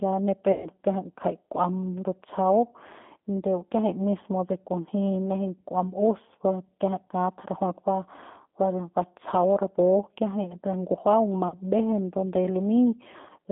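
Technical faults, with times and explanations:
Throughout: G.729 codec. The audio was carried at 8 kbit/s by a coder that sends only a vocal tract filter, a pitch predictor and a few pulses per 10 ms frame, so the decoder rebuilds an approximation rather than the original waveform. The line band runs from about 200 Hz to 3.6 kHz, which leaves the speech thin and muffled, and the coarse pulse excitation gives it a plainly audible rough, slightly synthetic edge.
0.52–0.69 s and 11.48–11.59 s: VoIP packet loss concealed by the speech codec. Right after "ya ni", about 120 ms of audio went missing, which fits six lost 20 ms packets. Near 11.5 s, about 40 ms went missing, which fits two. In both gaps the decoder repeated its last pitch and filter at falling gain, so the sound smears into a fading buzzy tone or coloured noise. Because each frame is predicted from the one before, the voice stays weak for a moment after the audio resumes.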